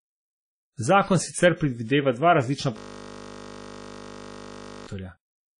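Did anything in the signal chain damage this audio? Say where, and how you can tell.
Yes. Two stages left marks. The first is the codec, likely WMA compression, and it runs through the whole clip. The speech carries plainly audible transform-codec damage: ringing, washy smearing around the syllables, and hiss that rises and falls with the signal. Nothing is present above 10.1 kHz, where the encoder zeroed the upper bands. Those traits fit a low bitrate of around 32 kbps, where quantisation noise spreads over long blocks and weak spectral lines are discarded.

The second is a system hang loop at the driver or buffer stage, from 2.78 s to 4.87 s, immediately after "sicer predvideva dva različna". The audio turns into a steady buzz at 50 Hz: one 20 ms piece repeats exactly, about 105 times. This means the host or driver stopped supplying new samples while the audio hardware kept cycling through the same ring buffer. 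The 20 ms loop length fits a buffer of about that size, which is short enough to be heard as a tone rather than a stutter.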